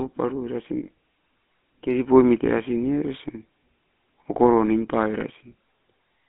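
From start to end the speech carries GSM full-rate codec damage. The band is limited to about 200 Hz to 3.4 kHz, and the regular-pulse excitation, keeping only a third of its samples, leaves a plainly audible buzzy, gravelly roughness, consistent with 13 kbps coding.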